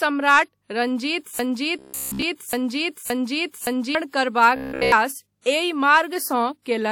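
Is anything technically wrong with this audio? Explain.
Yes, there are two distinct problems here.

From 1.39 s to 3.95 s there's a broken-record loop: a chunk of about 0.57 s plays four times back to back, exactly the same each pass, and whatever speech belonged in that stretch never arrives. The likely cause is a stall somewhere in the player, encoder or stream, which just kept pushing out the last fragment it had buffered until things recovered.

There's also robotic sound from repeated short buffers, at 1.79 to 2.22 s (inside that loop) and again at 4.56 to 4.92 s. Both stretches carry a rigid, metallic buzz at 66.7 Hz, and the buzz runs through essentially the whole of each stretch. That rate fits a sliver of roughly 15 ms being replayed over and over. This likely comes from fresh audio not arriving often enough, so the software filled the gap by repeating that sliver while the real material was dropped.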